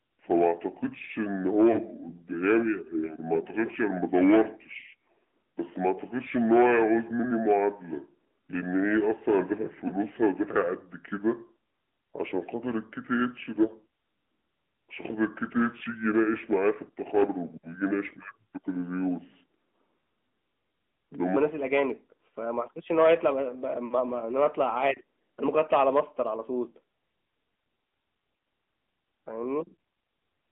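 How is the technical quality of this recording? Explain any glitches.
The technical quality is poor. The whole recording carries mobile-codec coloration, the first two thirds play back too slowly, and two brief dropouts interrupt the speech.

AMR narrowband mobile codec, throughout: the audio has passed through the AMR-NB speech coder used on 2G and 3G calls. It rebuilds speech from a vocal-tract model excited by a handful of pulses, sampled at 8 kHz, so the band is confined to roughly 200 Hz to 3.4 kHz. The damage is plainly audible: a boxy, telephone-thin tone with a buzzy, synthetic edge, which points to a mid-rate mode around 10 kbps.

Section at the wrong speed, 0.0 to 21.36 s: this stretch plays at about 0.667 times its original rate. Speed and pitch drop together, so the speech sounds drawn out, sluggish and roughly seven semitones deeper than it should. At 21.36 s it jumps to normal rate and pitch. 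The likely cause is playback or editing against the wrong clock, stretching this portion by half again its true length.

Lost AMR speech frames, 1.72 to 1.79 s and 9.88 to 9.92 s: at each point the speech briefly dips or wobbles. The sound fits one missing 20 ms frame each time. When a frame fails its error check, the decoder reuses the last good pitch and vocal-tract settings at reduced gain. That produces a short smeared warble, and the speech then resumes slightly weak or rough for an instant.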